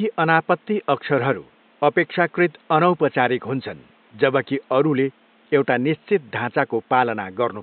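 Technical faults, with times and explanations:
No technical faults are present in this speech, so there are no times or explanations to give.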